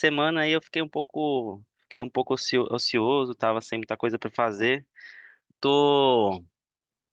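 At 0.99 to 1.10 s, and again at 1.91 to 2.04 s, a burst of packet loss stalls the speech. The receiver stretches the last sound into a held buzz or fading hiss, for about 80 ms and then 100 ms, before jumping ahead with that much speech skipped.

Inside the second burst, at 2.01 to 2.03 s, a lost packet rebuilt from error correction fills 20 ms from a low-bitrate copy carried in the next packet. Unlike the bursts, there is no gap or skip, only a briefly rougher, noisier patch.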